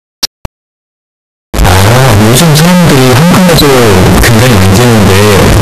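From the first moment to the last, the speech comes through as a blast of harsh, squared-off noise sitting at a high, almost fixed level. That's a float read as integer: the sound was likely written as 32-bit float and read back as 32-bit integer, so sign and exponent bits now dictate the level. Quiet background noise ends up as loud as the talking, yet the pitch contour still carries.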